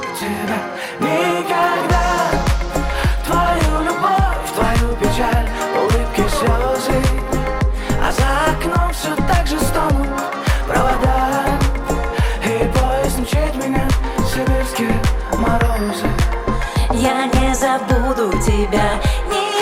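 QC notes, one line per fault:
Nothing to flag here; the audio comes through without any technical problems worth noting.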